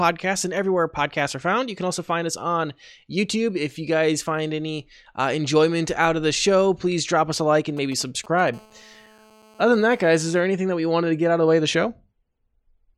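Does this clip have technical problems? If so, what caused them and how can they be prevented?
Yes. From 7.77 to 8.50 s, just after "us a like and", GSM signalling bursts cut in: a galloping dit-dit-dit of brief 217 Hz buzzes, roughly 20 dB under the speech. A nearby 2G phone's radio bursts are rectified by the audio circuitry. The waveform shows short clustered spike groups, and the spectrogram shows brief vertical stacks of harmonics. Keeping phones away from the gear, or switching them off or to flight mode, prevents this.

From 8.54 to 10.41 s, ending just before "anything that we wanted", a steady GSM phone buzz follows. It is a hard, raspy 217 Hz tone about 29 dB below the speech, produced as a phone in a call pulses its transmitter 217 times a second. The spectrogram shows evenly spaced horizontal harmonic lines at multiples of 217 Hz, and the waveform shows a regular comb of pulses. 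Shielded, balanced cabling and keeping phones away prevent this.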